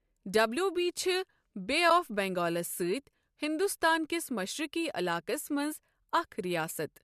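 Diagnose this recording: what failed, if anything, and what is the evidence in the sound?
A brief, soft-edged dropout in the speech at about 1.9 s, a gap of roughly 10 ms that fades out and back in. This is AAC frame loss with muting at the codec stage, which fits one lost low-delay AAC frame, likely AAC-ELD. The decoder zeroed that frame's spectrum, and the overlapping windows smoothed its edges.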